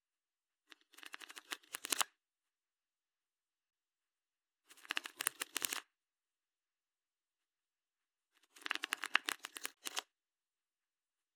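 At 9.74 s there's a gap between stream segments: a hard-edged hole of about 26 ms where segment timestamps don't meet, likely at a 6-second boundary, filled with silence.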